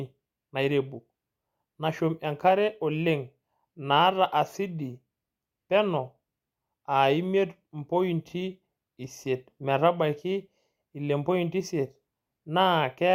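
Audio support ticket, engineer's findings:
Nothing stood out on listening to the speech recording, so no findings to log against it.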